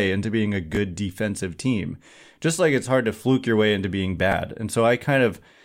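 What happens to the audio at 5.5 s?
Nothing goes wrong at 5.5 s: the speech there carries on intact, with no dropout, click or distortion.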